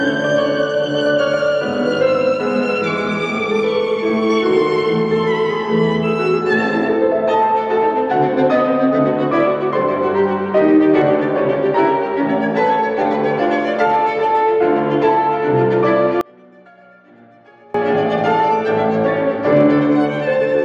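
From 16.21 to 17.74 s the sound collapses to a faint residue, dropping by about 29 dB before returning at full level. This behaviour points to one channel inverted: with one stereo channel's polarity likely reversed, the material common to both channels cancels when they are summed to mono, so the centred content vanishes and only the small difference between left and right remains audible.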